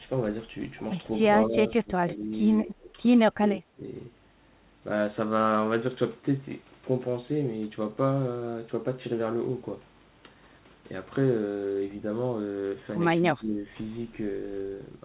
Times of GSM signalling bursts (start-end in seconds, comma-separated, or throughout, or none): none